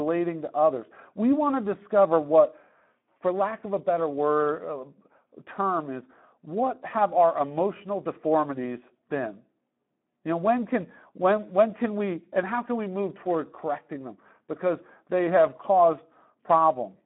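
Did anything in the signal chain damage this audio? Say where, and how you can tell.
Yes, at the codec stage, throughout the speech. The Speex codec leaves it hoarse and noisy, plainly so. The band runs about 200 Hz to 3.4 kHz, with nothing above 3.8 kHz. That damage fits a bitrate near 11 kbps, which starves the excitation of bits.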